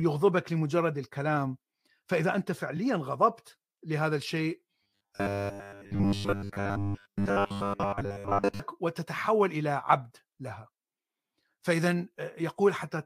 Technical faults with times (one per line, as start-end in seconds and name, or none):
2.76-2.78 repeated frames
4.83-8.60 robotic sound from repeated short buffers